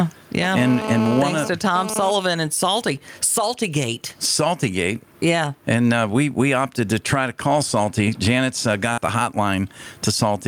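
Right through the speech there's gain pumping: the level gets pulled down on each loud syllable, swinging by something like 20 dB. That's likely the input gain set way too high with a fast limiter clamping down, so everything sounds squashed and flat in level.

From 0.43 to 2.11 s a GSM phone buzz sits on top, a harsh, raspy 217 Hz rattle full of harmonics, only about 10 dB below the speech. It comes and goes in bursts, which fits a nearby 2G phone doing a data transfer, its radio pulses getting rectified in the audio circuit.

At 8.93 to 8.99 s there's a short concealed packet loss. About 40 ms never arrived in time, so the receiver stretched the preceding sound over the gap and blended back in. You hear it as a quick smear or wobble in the speech.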